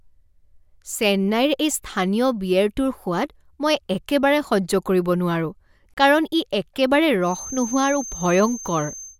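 At 5.94 s the speech drops out for about 33 ms, a gap at a join of encoded pieces, before picking up right where it left off. It sounds like the audio was encoded in separate chunks, every 6 s here, and stitched together without trimming. Each encoder pass leaves a bit of start-up silence and padding on its last frame, so you get a short hole with edges smeared by the codec.

From 7.19 s through to the end there's a thin, steady whistle sitting at 6.3 kHz, roughly 15 dB under the speech, swelling and fading slowly in level but never building up. That's a feedback whistle, most likely a loudspeaker-to-microphone loop parked right at the edge of feedback, so that one high frequency keeps ringing without tipping over into a full howl.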